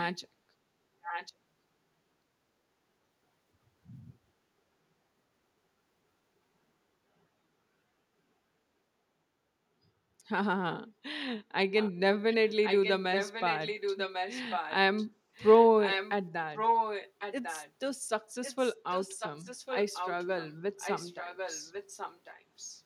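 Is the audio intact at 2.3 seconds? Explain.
Yes, at 2.3 seconds the audio is intact, with no dropout, click, distortion or other fault at that point.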